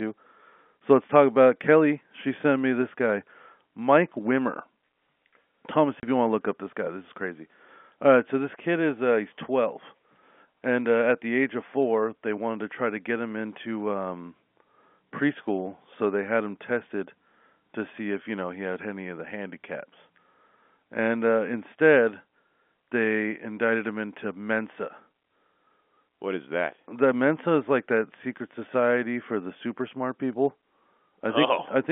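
At 6.0 s, just before "if you want to", the speech drops out for 30 ms: packet loss filled with silence. One stretch of audio never arrived, which fits a single lost packet, and the receiver played silence in its place, so the gap has abrupt edges against the G.711 telephone band.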